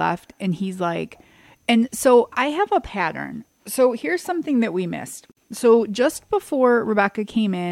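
A gap at a join of encoded pieces opens from 5.32 to 5.37 s: a 52 ms gap cuts into the continuous speech, its edges smeared by the codec, then the sound resumes where it stopped. The pieces, joined every 6 s, kept their encoder start delay and end padding untrimmed.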